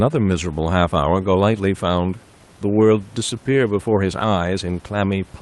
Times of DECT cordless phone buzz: none

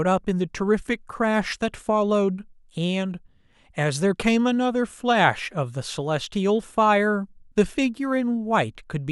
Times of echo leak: none

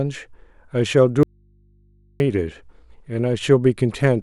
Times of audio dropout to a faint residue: 1.23-2.20

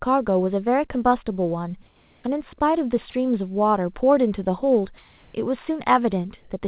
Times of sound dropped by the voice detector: 3.10-3.14

